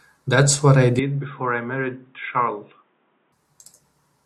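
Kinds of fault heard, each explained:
Input switched to a poorer device: At 0.99 s the speech suddenly goes dull and boxy, with nothing above 3.8 kHz, drops by about 10 dB, and picks up faint new background noise roughly 40 dB under the signal, all with no gap at the changeover. At 3.32 s the full brightness and level snap back. That's most likely the recording input hopping to a lower-grade mic or a headset call profile and then returning.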